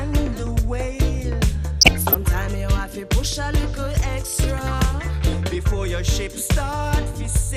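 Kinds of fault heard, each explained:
MP2 compression: There's a dull, gurgly graininess all the way through, with the top end thinning out and coming and going. That's likely MPEG Layer II running short of bits, dropping upper sub-bands and coarsely quantising the rest, plausibly around 80 kbps.
DAB burbling: From about 1.81 to 2.22 s there's a burst of burbling noise blips on top of the sound. It's what you get when reception errors slip through error correction, corrupting samples and scale factors so individual sub-bands jump in level frame by frame.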